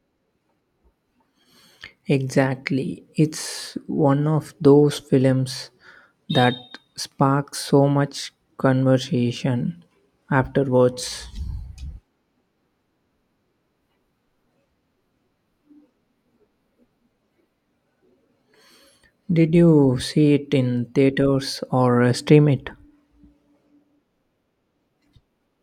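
Speech recording with no audible technical fault anywhere in it.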